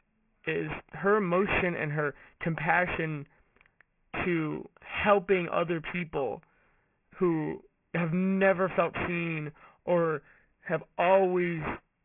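Speech with aliasing throughout. Sibilants sound gritty and metallic, and energy runs hard up to about 3 kHz. That fits a downsample to a 6 kHz rate without an anti-alias filter. Higher frequencies fold back as unrelated tones, only about 10 dB below the speech.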